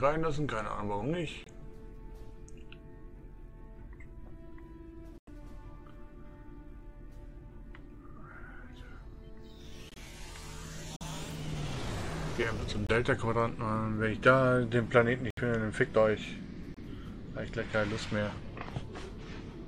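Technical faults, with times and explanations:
1.44–1.48 s, 5.18–5.29 s, 9.89–9.98 s, 10.96–11.03 s, 12.87–12.91 s, 15.30–15.39 s, 16.74–16.78 s: corrupt frame muted. Damaged compressed frames were rejected and replaced with silence. Each gap cuts in abruptly, and timing holds.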